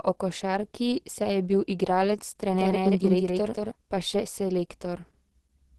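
Speech runs through the whole clip with plainly audible damage, likely from Opus compression. Nothing is present above about 12.1 kHz, and the sound is muffled, hoarse and grainy in the way of Opus's hybrid speech mode at a low rate, which fits roughly 16 kbps. The absence of swirling, watery holes in the spectrum distinguishes it from MP3. From 2.58 to 3.72 s a doubled audio track appears. A second, full-band copy at about the same level follows roughly a fifth of a second behind, as if captured again through a slower path. It differs from an echo or room reflection because the copy has no decay and no added room colour, and it starts and stops abruptly at those times instead of fading.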